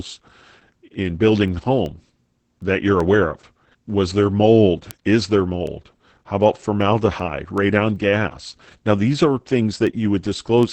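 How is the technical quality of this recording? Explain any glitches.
The quality is poor. Heavy voice-codec damage runs through the whole recording, and a steady train of clicks sits on top of it.

Opus voice compression affects the entire clip. The speech sounds muffled and slightly hoarse, with a faintly robotic edge, and nothing is present above about 8.6 kHz. That points to Opus in its SILK linear-prediction mode at a wideband setting. The codec cuts the band and codes the vocal excitation coarsely, which fits a very low rate of around 10 kbps.

Word clock ticks run from 0.34 s to 10.63 s. They are short, sharp clicks of uneven strength, arriving roughly every 0.4 s, about 30 in all. They come from a digital link read by a device running on its own clock, off from the sender's by roughly 50 ppm. Each time the two clocks slip past each other, a single sample is dropped or repeated, and that leaves a tick.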